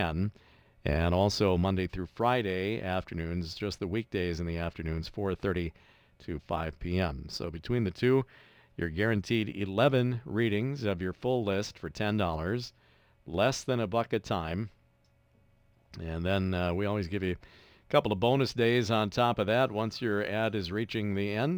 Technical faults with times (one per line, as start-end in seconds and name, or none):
0.00-21.57 sample clock jitter